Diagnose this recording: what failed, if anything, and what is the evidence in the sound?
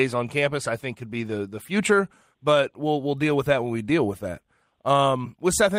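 Clock drift between sender and receiver sits at the network jitter buffer. The sender's clock runs roughly 5 percent fast, so the buffer keeps overfilling and the receiver must discard audio. Small hiccups recur across the speech at uneven intervals. The waveform shows faint discontinuities where segments abut.

Repeated timing corrections run from 0.15 s to 5.71 s, with the speech playing at 104 percent of natural pace as the receiver trims short pieces, always removing rather than repeating. On a spectrogram, harmonic tracks show abrupt small breaks and jumps at irregular spacing.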